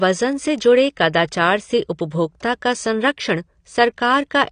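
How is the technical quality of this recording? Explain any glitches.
Quality is noticeably degraded throughout. The speech sounds dull and smeared, with a fizzy, warbling texture on sibilants. This is likely AAC compression: at a low bitrate, around 32 kbps, the encoder drops high frequencies and coarsely quantises the rest.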